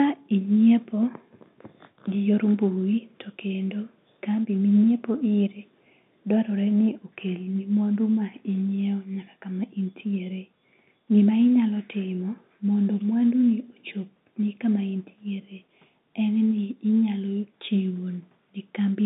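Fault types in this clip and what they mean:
Nothing here counts as a fault; it's just speech coming through an ordinary telephone line, with the narrow band you'd expect from that kind of call.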